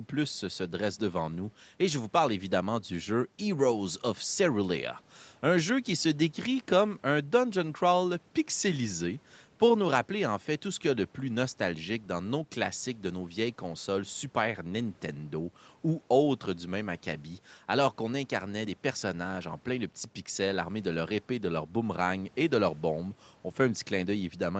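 Nothing's wrong with this speech recording: it has simply gone through a call's microphone processing and an Opus call path, so the sound stops at around 8 kHz, just as you'd expect from a call.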